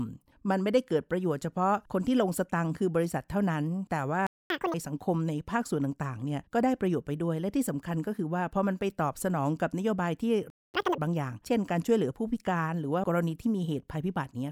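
At 4.27 s the player most likely ran short of data or had its thread blocked, a playback stall, so the speech cuts out mid-flow for about 0.24 s, until 4.50 s. From 4.50 to 4.74 s it works off that backlog by resampling at 2.0 times normal speed, a catch-up at higher speed, which raises the pitch by roughly ten semitones into a brief chipmunk-like rush before normal speed returns. The same pattern recurs later: a stall from 10.50 to 10.74 s, again about 0.24 s of silence, followed by 2.0-times catch-up from 10.74 to 10.98 s with the same sharp pitch rise.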